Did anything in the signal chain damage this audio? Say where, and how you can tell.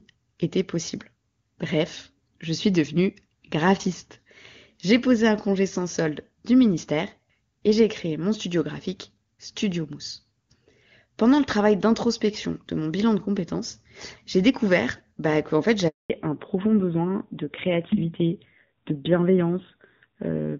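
Yes. At the network stage there is a handover gap from 15.88 to 16.10 s, right after "découvert bah qu'en fait". While the call switched networks, no speech frames arrived for 220 ms. The speech dies away and goes silent, and whatever was said in that stretch is lost.

At the codec stage, a fallback to narrowband runs from 16.10 s to the end. The call dropped from clear HD Voice (AMR-WB) to an older narrowband codec, so everything above 4 kHz disappears. The speech turns duller and rougher, consistent with a low-rate AMR-NB mode around 7.4 kbit/s.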